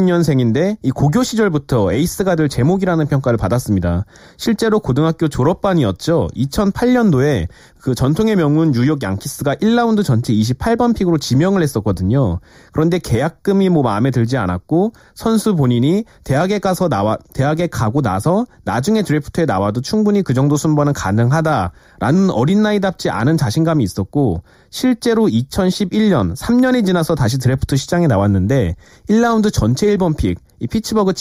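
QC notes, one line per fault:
Throughout, channel delay (comb filtering): the speech sounds hollow and phasey. One channel lags the other by roughly 0.2 ms before the two are summed to mono. Content common to both then cancels at evenly spaced frequencies, carving fixed notches into the spectrum starting near 3 kHz and repeating at regular intervals above it.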